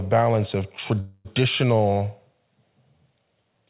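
At 1.00 s a call audio freeze begins, most likely because packets stalled in transit and the jitter buffer ran dry. To cover the gap, the receiver stretches the last sound into a fading buzzy hiss for about a quarter of a second, until 1.27 s. The audio then resumes exactly where it paused, with nothing lost, but everything afterwards arrives about 0.25 s late. Throughout, the narrowband call path shows no content above 4 kHz.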